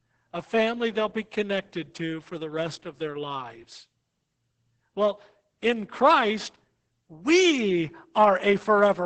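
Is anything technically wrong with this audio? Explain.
Yes. Opus voice compression affects the whole speech clip. The SILK linear-prediction coder runs in wideband with nothing above 8.7 kHz, and the excitation is coded coarsely, which fits a bitrate near 10 kbps. The speech sounds muffled, hoarse and slightly robotic.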